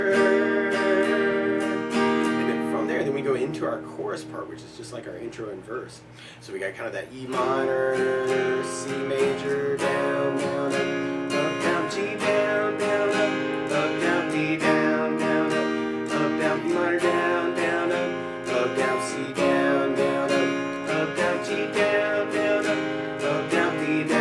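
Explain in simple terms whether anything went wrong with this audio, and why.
Nothing went wrong with this audio that a careful listen picks up. No dropouts, glitches or other technical problems can be heard anywhere in the recording.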